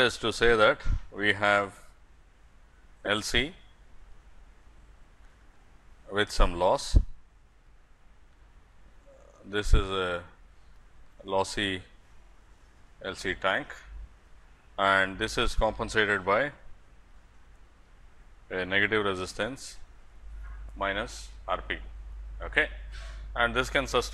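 The audio stutters from repeated frames: a short block of about 2.9 ms plays three extra times at 3.06 s, a 46 ms block repeats once from 4.81 to 4.85 s, and again twice from 12.23 to 12.33 s. Each replay lengthens the audio, which fits compressed frames being written more than once.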